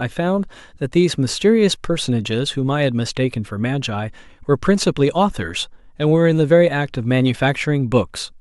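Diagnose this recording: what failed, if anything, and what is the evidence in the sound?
Nothing in the speech stood out as a fault on listening, so there is no failure to diagnose.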